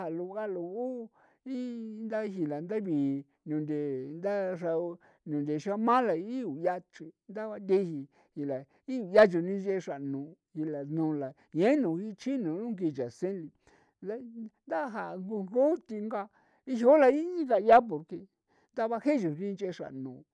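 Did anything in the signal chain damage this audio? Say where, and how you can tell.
No, nothing in this speech recording points to damage at any stage of the signal chain. Listening across the whole clip turns up no event that would tie a problem to the wiring, the converter, the buffering, any processing, the network or the storage.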